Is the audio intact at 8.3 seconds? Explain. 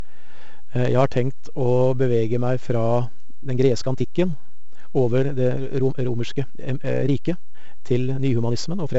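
No. At 8.3 s the speech sits inside a time-stretched section running from 3.34 s to the end of the clip. The pace is about 1.4 times faster while pitch stays put, most likely because software squeezed the audio by dropping short fragments, so it sounds rushed.

The same moment also carries 4-bit ADPCM compression, which runs throughout. Each sample is coded as a coarse step from a prediction, so a gritty hiss rides on the louder speech and sharp attacks distort. The damage is heavy, in a stream of about 64 kbps.

A DC offset is present there too, as it is across the whole clip. The waveform is shifted off zero by a constant amount. It is not audible as a sound, but it takes up headroom and shows as steady energy at the very bottom of the spectrum.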